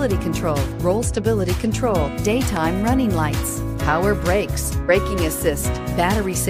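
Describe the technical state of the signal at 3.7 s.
At 3.7 s the signal is intact, with no audible dropout, distortion, clipping or other technical fault at that point.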